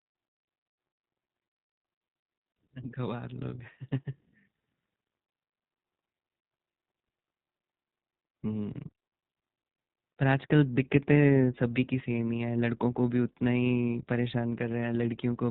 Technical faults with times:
0.00-15.50 iLBC codec

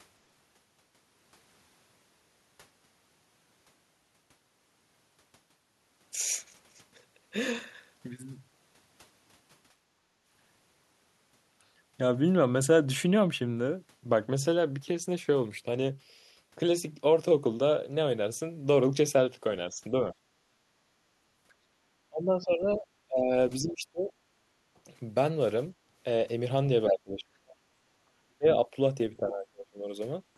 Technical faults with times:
9.95-10.21 background gated by the echo canceller
19.71-19.93 speech suppressed in double talk
20.39-20.68 background gated by the echo canceller
22.09-24.12 speech suppressed in double talk
24.40-24.46 background gated by the echo canceller
26.89-29.92 speech suppressed in double talk
27.88-27.92 background gated by the echo canceller

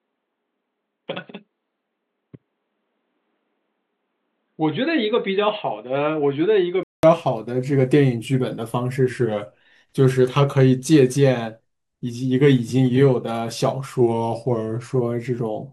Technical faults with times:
0.00-7.03 input switched to a poorer device
1.11-1.83 drift correction step
9.09-9.60 drift correction step
14.01-14.95 drift correction step

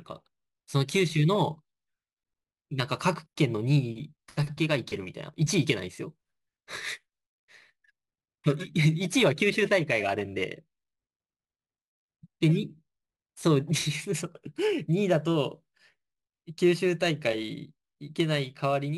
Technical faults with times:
0.00-18.98 imaging from sample-and-hold upsampling

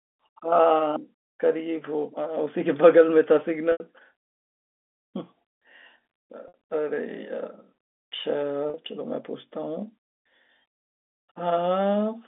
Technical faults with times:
3.72-3.80 packet loss with pitch repetition
6.48-6.54 packet loss with pitch repetition
8.70-8.74 packet loss with pitch repetition

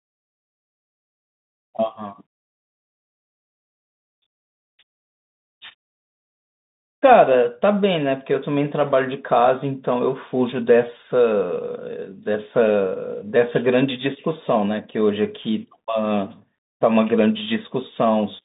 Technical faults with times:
0.00-18.45 Bluetooth CVSD headset codec

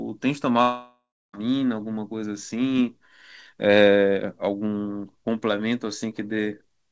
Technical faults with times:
0.62-1.35 long network dropout

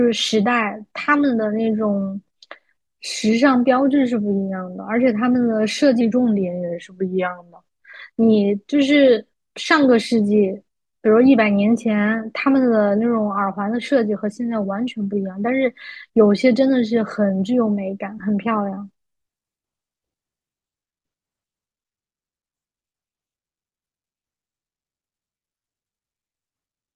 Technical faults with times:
6.01-7.64 wrong sample rate

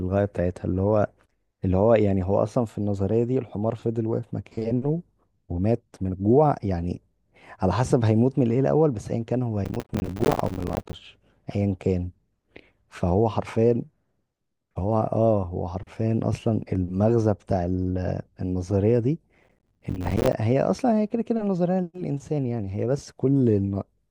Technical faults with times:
9.65-10.95 processor overload crackle
19.38-20.33 processor overload crackle

